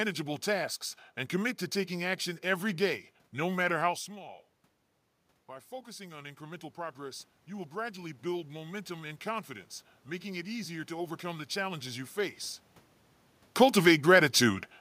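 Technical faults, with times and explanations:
5.48–9.55 s, automatic gain rising: after the talker moves away from the microphone around 4 s, the input falls by about 15 dB, and the automatic gain control raises its gain by about 8 dB over four seconds. Voice and room noise swell together up to "making it easier to".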